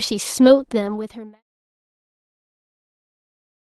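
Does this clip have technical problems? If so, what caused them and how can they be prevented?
No, the signal has no technical faults; its top end stops at about 12 kHz, as fits an Opus call path at around 32 kbps, and the level fades out smoothly from about half a second to 1.43 s.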